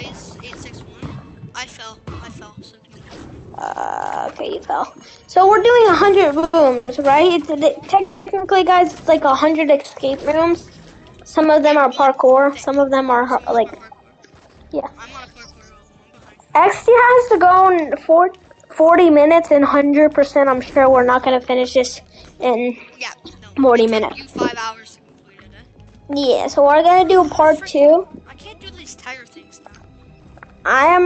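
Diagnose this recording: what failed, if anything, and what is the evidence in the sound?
The trouble is all on the network side, with the jitter buffer covering for late packets. The call path itself, Opus with its top end rolled off at about 8 kHz, is just the ordinary codec sound here.

Repeated stalls (stutter) show up between 6.39 and 6.89 s. The buffer ran dry three times in half a second, and the receiver stretched the last sound to fill 220 ms, the longest gap being 100 ms. That's 44% of the span made up rather than played. Nothing is actually dropped, but the audio drags and stutters through that stretch as packets trickle in slower than playout.

There's a call audio freeze from 8.01 to 8.28 s. The sound hangs for about 250 ms as a continued, fading tail. It never drops to silence, and then it picks up exactly where it left off, so a gap has been inserted rather than anything cut. 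The likely cause is a burst of packets held up in transit, which left the jitter buffer empty and pushed the playout delay out by that quarter second.

Right behind it, from 8.38 to 8.42 s, there's a short stall from a late packet. One packet missed its slot, so the receiver stretched the preceding sound by 20 ms until it showed up, then carried on from the same place. You hear it as a brief held sound with a slight buzzy dip, not a dropout. It's another small step in delay, coming straight off the back of the freeze.

Jitter buffer speed-up happens twice. From 12.40 to 14.35 s the audio runs at 110%, with around a fifth of a second trimmed out. From 28.02 to 28.40 s it runs at 114%, with something under a tenth of a second removed. In both places the receiver snipped out pitch-period-sized slices to drain the backlog, so the pitch stays put but things sound a bit hurried.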